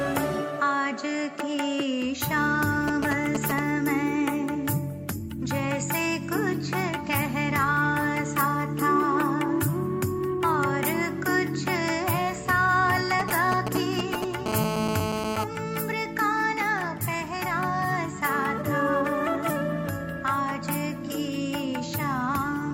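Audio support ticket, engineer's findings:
Galloping dit-dit-dit ticks and short 217 Hz buzzes, 2.88–3.59 s and 13.20–14.48 s, at roughly signal level: GSM signalling bursts from a nearby 2G phone, rectified by the audio circuit.

Hard, raspy 217 Hz buzz rich in harmonics, steady 14.48–15.44 s, about 2 dB below signal: GSM phone buzz. A nearby 2G handset is in a call, and its 217 Hz radio pulses are demodulated into the audio path.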